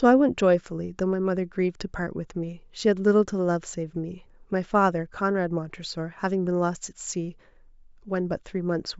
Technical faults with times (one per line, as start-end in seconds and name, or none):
none